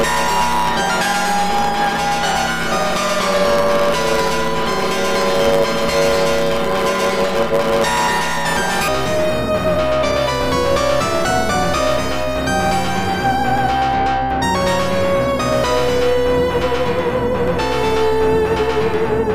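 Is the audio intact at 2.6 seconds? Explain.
No. From 0.0 to 8.89 s, planar audio read as interleaved replays each 10 ms block twice at double speed, producing a robotic 100 Hz buzz, seen as regular 10 ms striations in the spectrogram.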